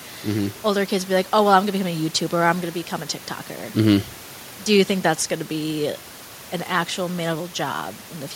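A speech recording with no technical faults to report. Background noise from the room sits about 24 dB below the speech and belongs to the original recording, not to any problem in the system.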